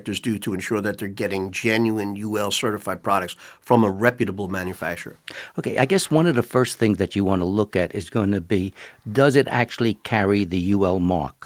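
No technical faults are audible.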